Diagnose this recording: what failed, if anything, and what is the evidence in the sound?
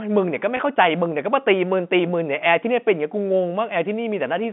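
At 0.57 s the sound briefly holds on a slightly buzzy tone for about 20 ms. This is packet loss with pitch repetition at the network stage: the gap fits two lost 10 ms packets, and the receiver filled it by repeating the last pitch period of the G.711 telephone-band signal.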